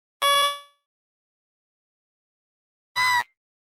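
The audio carries two brief short concealed packet losses, at 0.33 to 0.37 s and 0.39 to 0.44 s. Each leaves a quick smear or wobble. Audio arrived late or not at all, and the receiver patched each gap by extending the preceding sound before blending back. A long network dropout follows from 0.44 to 2.97 s. The last sound is stretched into a fading buzz, then about 2.1 s of silence remain. The audio returns at 2.97 s with that whole stretch missing, likely from a network outage.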